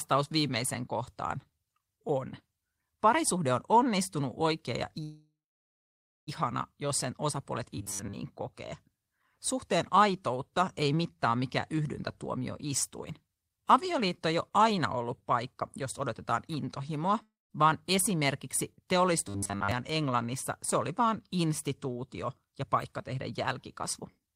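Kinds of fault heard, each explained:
call audio freeze: Packets were likely held up in transit until the jitter buffer ran dry. Right after "on onnistunut oikea ja", at 5.03 s, the last sound is stretched into a fading buzz that falls to silence for about 0.92 s. The speech resumes at 6.29 s exactly where it stopped. Nothing is lost, but about 1.24 s of gap has been inserted, which pushes everything after it later by that amount.
robotic sound from repeated short buffers: Fresh audio was likely arriving too seldom, so the receiver kept replaying its last 10 ms segment, and most of the real signal was skipped. Those repeats impose a fixed 100 Hz buzz on the speech, which turns rigid and metallic while loosely following the original contour. This happens after "sen osapuolet" from 7.78 to 8.15 s, and again after "vaan esimerkiksi" from 19.28 to 19.71 s.
jitter buffer speed-up: The jitter buffer held more audio than its target, so the receiver cut out short pitch-period pieces repeatedly to lower the delay. 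The speech runs faster without any change in pitch and sounds slightly hurried. From 12.26 to 16.58 s it plays at 106% speed with about 0.3 s removed. From 22.38 to 23.32 s it is again at 106% with about 70 ms taken out. From 23.82 to 24.34 s it is at 109%, losing about 50 ms.
long network dropout: A stretch of packets likely never arrived, and 380 ms of speech is gone for good. At 17.23 s the receiver carries the last sound forward as a fading buzz for about 270 ms, with roughly 180 ms of that being silence. At 17.52 s the speech comes back further along, skipping the lost part, and the playback delay shrinks by roughly 0.1 s.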